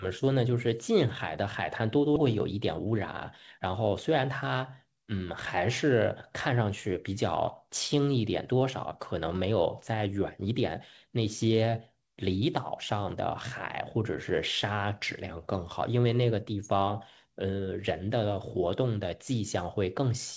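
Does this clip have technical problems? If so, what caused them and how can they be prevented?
Yes. At 2.16 s the speech skips ahead. About a second of audio is missing, and the two sides join almost directly. Late audio overflowed the jitter buffer, so a stretch was discarded. A larger buffer or steadier network prevents this.

From 2.85 to 3.60 s there is a jitter buffer speed-up. Speech runs about 7% fast at unchanged pitch. The receiver trimmed short pitch periods, roughly 70 ms in total, to cut the backlog. Reducing bursty packet arrival prevents it.

The call codec's band limit, with nothing above 8 kHz, fits G.722.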